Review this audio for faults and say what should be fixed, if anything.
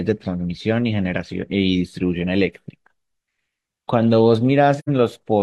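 There is AAC frame loss with muting from 4.79 s to 4.89 s. The speech drops into a short silent gap. Its edges fade rather than cut. The decoder had no data for that stretch, so it zeroed the spectrum. The overlapping transform windows then ramp the sound down and back up. The gap of about 85 ms fits two lost frames. Adding error protection or retransmission on the stream would prevent these dropouts.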